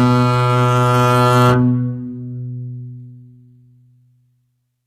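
HE-AAC compression runs through the whole of this music clip, from start to finish, and the damage is plainly audible. Nothing sounds above about 14.9 kHz, and the treble below that cut-off has a synthetic, grainy quality rather than the detail of the original. That fits the likely cause, a low-bitrate HE-AAC v2 encode around 20 kbps, where only the lower spectrum is truly coded and the upper bands are regenerated from copied lower material under a coarse envelope.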